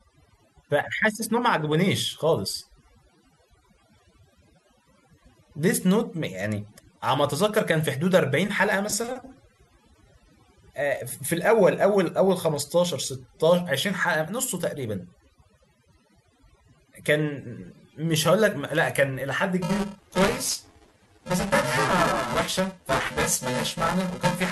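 From the start, overdone noise removal is audible. The reduction is set too aggressively, so frequency bands close to the noise estimate are pulled down or cut outright. The background drops and breaks up into twinkling specks.

At 19.62 s buffer tearing begins and continues to the end. The writer and the playback hardware have drifted so they cross inside every period, leaving roughly half of each buffer holding audio about 10 ms old, with hard joins on both sides. The result is a robotic buzz at 375 Hz, consistent with a 128-sample buffer, present only while signal is present.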